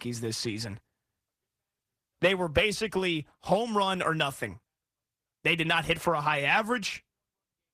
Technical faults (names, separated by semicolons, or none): none